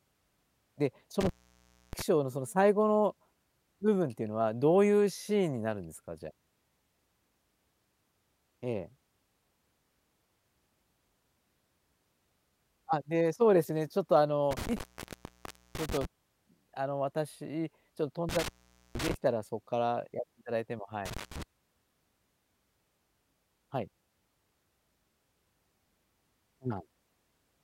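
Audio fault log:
1.21–2.02 s, 14.51–16.05 s, 18.29–19.14 s, 21.05–21.43 s: intermittent contact. The speech drops out for about 0.64, 0.94, 0.47 and 0.15 s. A loose connection briefly breaks the signal path. Crackle marks each break and reconnection, and faint hiss remains during the gap.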